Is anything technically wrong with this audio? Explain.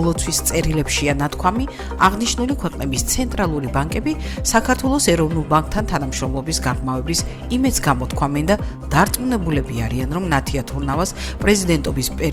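No, no technical faults here.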